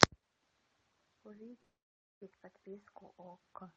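A speech clip with a call audio freeze from 1.62 to 2.22 s. The sound stalls for about 0.6 s, nearly all of it silence, then resumes where it stopped with nothing lost. Delayed packets likely starved the jitter buffer. The call-path coding keeps content below about 8 kHz.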